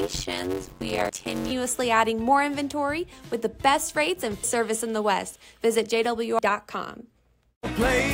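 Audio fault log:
0.00–1.51 s, block size mismatch (padded): One stage hands over 256-sample blocks to a stage reading larger ones, which fits a read size near 480 samples. The remainder is zero-filled, so a gap recurs at 91.9 Hz as a buzz, and the audio runs at 0.533 times speed.
1.09 s, 4.44 s, 6.39 s, damaged data in a compressed stream: Corrupted bytes in the encoded stream make the decoder misread frames and lose sync while it hunts for the next valid header. Each spot is heard as a brief chirp or blip.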